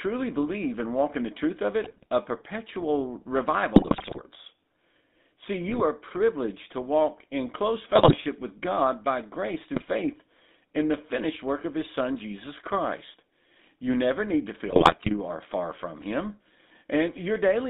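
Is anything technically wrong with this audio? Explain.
Yes. The speech has a constant buzzy, gravelly roughness and a muffled, narrow tone, the mark of the GSM full-rate codec. This codec rebuilds the voice from a vocal-tract model driven by regularly spaced pulses at 13 kbps, and the line passes only about 200 Hz to 3.7 kHz.

Six bursts of squawks, pops and gargling interrupt the speech at 1.84 to 2.06 s, 3.76 to 4.21 s, 5.68 to 5.83 s, 7.92 to 8.14 s, 9.74 to 9.87 s and 14.63 to 15.15 s. These are GSM bit errors: roughly 1 to 3 percent of bits flip on a weak link, corrupting filter, pitch and gain values frame by frame.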